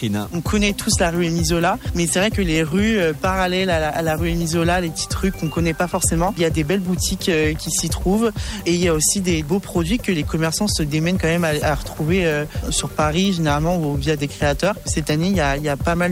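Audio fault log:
Throughout, low bit depth with dither: a steady, even hiss sits under the whole sound, roughly 25 dB below the signal. That level fits a signal rounded to about 7 bits. Before rounding, a small random noise was added. It breaks the link between the rounding error and the signal, so the error spreads into flat white noise. The result is hiss rather than distortion. The hiss does not pump or follow loudness. It stays constant across quiet and loud passages alike.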